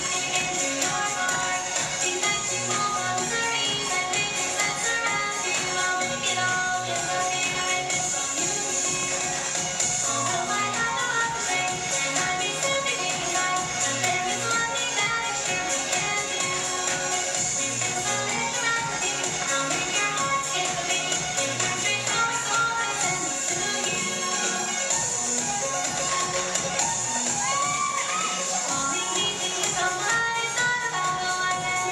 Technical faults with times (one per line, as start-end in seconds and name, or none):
9.03-11.92 train of clicks